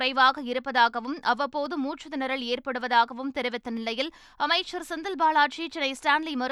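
Sharp single clicks cut through the speech at 0.38, 1.66, 2.81, 3.77 and 4.84 s, each showing as a thin vertical line across the spectrum. These are likely dropped samples: a tiny fraction of a millisecond vanishes, so the waveform jumps abruptly to a later value.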